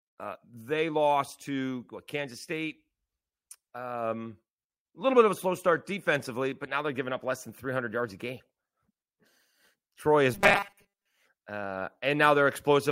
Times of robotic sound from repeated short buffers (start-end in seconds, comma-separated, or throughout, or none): 10.34-11.07